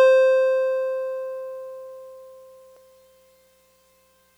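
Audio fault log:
2.77 s, compressed frames skipped: the music jumps ahead by roughly a tenth of a second as whole frames go unplayed.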